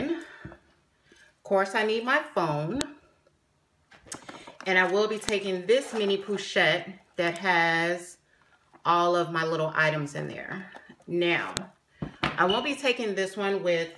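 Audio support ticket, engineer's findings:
Sharp, loud click/snap at 2.81 s, 5.29 s and 11.57 s, each about a millisecond or less long and independent of surrounding signal level. Probable component: file concatenation or streaming stage. File header played as audio: WAV headers left in at each segment join, header bytes decoded as samples. Waveform: spike, discontinuous with the signal around it. Spectrogram: thin broadband vertical line at each time, top to bottom. Fix: strip headers before joining.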